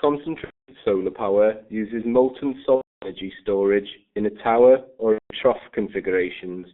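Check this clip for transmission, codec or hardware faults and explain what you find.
Two faults are present. Throughout, the speech carries heavy G.723.1 codec damage: band-limited to about 200 Hz–3.6 kHz, muffled and hoarse with smeared consonants, consistent with a 6.3 kbit/s stream.

At 0.44–0.74 s, 2.76–3.11 s and 5.13–5.35 s, VoIP packet loss is concealed by the speech codec. The decoder extrapolates the last pitch and filter, producing a fading buzzy tone or coloured noise, with weak or distorted speech just after each gap.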